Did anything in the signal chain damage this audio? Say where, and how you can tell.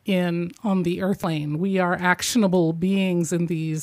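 Yes: compressed frames skipped at 1.24 s, just after "in on the". The speech jumps ahead roughly 150 ms, about two 85.3 ms codec frames missing or refused by the decoder.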